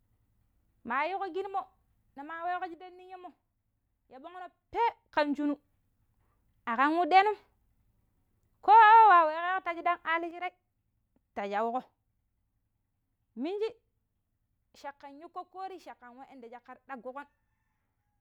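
One channel drops out from 2.74 to 5.14 s and again from 10.31 s to the end: the speech level falls abruptly by about 6 dB, then recovers at 5.14 s. The likely cause is one stereo channel going silent, halving the mono sum.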